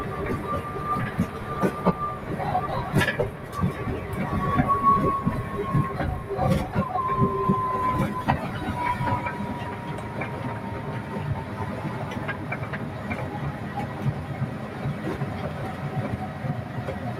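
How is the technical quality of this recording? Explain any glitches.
The quality takes a clear hit from one problem running the whole way through: a noise suppressor applied to music or sounds. It's a speech-tuned suppressor that treats anything steady, like sustained tones, room ambience and reverb tails, as noise and pulls it down by roughly 10 dB. Sharp onsets slip through, but held material sinks right after, so the audio pumps and flutters and the decays sound thin and chopped off.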